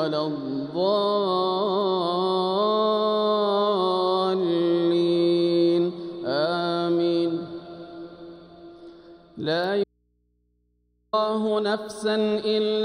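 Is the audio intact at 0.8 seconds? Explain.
Yes, at 0.8 seconds the audio plays through cleanly, with no dropout, click, distortion or other fault at that moment.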